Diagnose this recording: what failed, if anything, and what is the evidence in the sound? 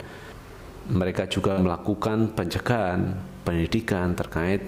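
A burst of packet loss at the network stage, from 1.51 to 1.59 s: the last sound is held and faded for about 56 ms as the receiver conceals the gap, then the audio resumes with roughly 60 ms of material skipped.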